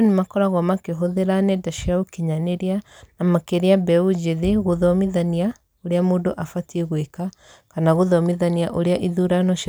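No technical faults can be heard in the recording.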